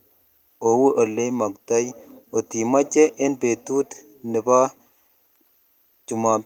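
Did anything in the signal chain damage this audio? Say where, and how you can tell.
No, nothing in the chain damaged this speech.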